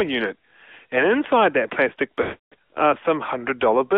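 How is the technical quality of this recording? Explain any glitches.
The recording has been through a narrowband mobile codec, with one clear dropout on top of it.

Throughout the clip, the AMR narrowband mobile codec squeezes the speech into a 300 Hz to 3.5 kHz telephone band. The encoder rebuilds the voice from a vocal-tract model driven by a few pulses per short subframe, so consonants lose their air and vowels turn buzzy and slightly synthetic. The damage is plainly audible, which fits a mid-rate mode around 10 kbps. Unlike a plain band-limited phone line, the synthetic buzz comes from the codec model rather than from filtering alone.

From 2.22 to 2.54 s, just after "inside that plastic", lost AMR speech frames interrupt the audio for about 300 ms, which fits roughly fifteen 20 ms frames failing their checks. The decoder repeats the last good pitch and vocal-tract settings at falling gain, so the sound smears into a held, warbling tail that sinks toward silence before the voice returns thin and rough. 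A plain dropout would cut off abruptly. This one stretches and fades first.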